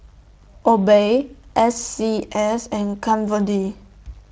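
No technical faults can be heard in this speech.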